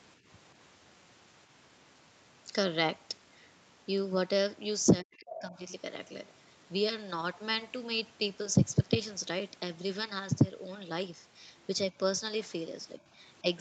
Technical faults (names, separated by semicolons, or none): speech suppressed in double talk; other side's voice leaking through